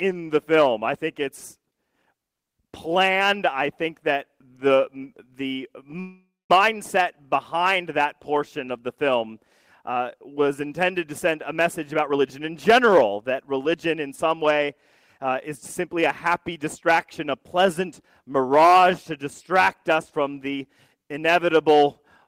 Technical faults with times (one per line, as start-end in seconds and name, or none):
6.00-6.51 call audio freeze
11.25-14.71 jitter buffer speed-up
15.18-17.39 jitter buffer speed-up